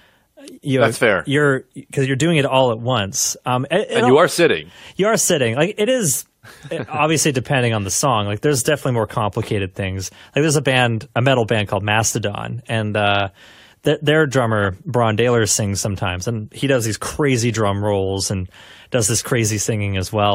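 No technical faults can be heard anywhere in the speech.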